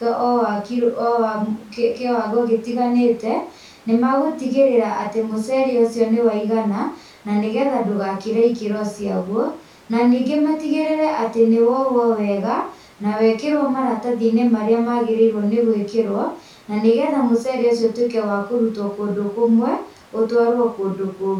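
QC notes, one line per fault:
No technical faults are present in this speech recording; the signal holds steady from beginning to end.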